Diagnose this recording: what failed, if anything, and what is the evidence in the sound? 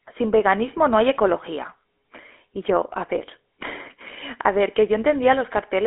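At the codec stage, the speech went through a GSM full-rate codec, consistent with 13 kbps. Regularly spaced pulses drive its vocal-tract model, keeping one excitation sample in three, so throughout it sounds plainly buzzy and gravelly, confined to 300 Hz to 3.4 kHz, nothing above 3.8 kHz.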